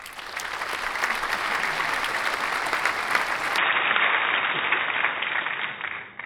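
At 3.58 s the sound abruptly turns dull and boxy with no gap, losing everything above 3.8 kHz for the rest of the clip, shifting in level by about 5 dB and gaining a faint new background noise. This points to the input likely being switched to a poorer device.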